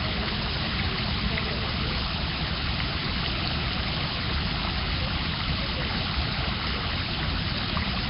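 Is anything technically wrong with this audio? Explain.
Yes. Throughout, the audio was likely squeezed through Nellymoser compression at a low bitrate near 22 kbps. The codec spends only two bits per sample in short blocks, fills starved bands with noise, and nothing survives above 5.3 kHz. The sound is dull, smeared and underwater, with a rough hiss clinging to it.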